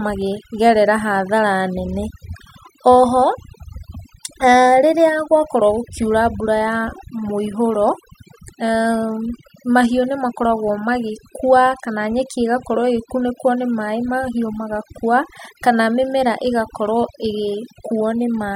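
From start to finish the speech shows overdone noise removal: an over-aggressive noise reducer is cutting frequency bands that sit near its noise estimate, so the background collapses into near silence with twinkling specks, and softer speech detail is stripped away.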